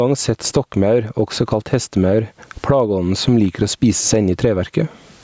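Gain pumping runs through the whole recording, likely from input gain set far too high with a fast limiter clamping every loud sound. The gain swings by around 25 dB between loud and quiet moments. The waveform looks flattened, peaks pinned near one level, while the spectrogram stays within the call processing's band ending at 8 kHz.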